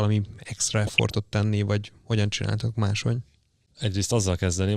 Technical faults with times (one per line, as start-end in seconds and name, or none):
0.87-1.15 DAB burbling